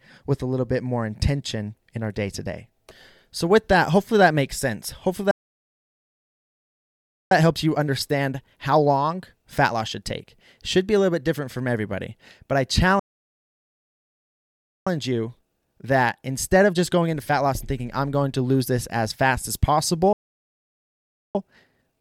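The speech hits a playback stall three times, dropping to silence from 5.31 to 7.31 s, from 12.99 to 14.87 s after "from everybody but I", and from 20.13 to 21.35 s after "this as fast as". That's likely the player starving for data. Each gap is followed by time-compressed catch-up at normal pitch, running 1.1x from 7.31 to 10.31 s and from 14.87 to 17.87 s, beginning with "I'm going to lose". The last one is 1.5x from 21.35 s to the end.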